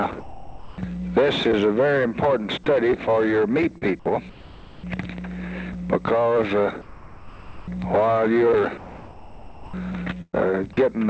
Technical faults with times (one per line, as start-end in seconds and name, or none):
0.20-0.78 sound dropped by the voice detector
3.78-3.83 short concealed packet loss
4.29-4.83 sound dropped by the voice detector
6.81-7.67 sound dropped by the voice detector
8.77-9.73 sound dropped by the voice detector
10.21-10.35 burst of packet loss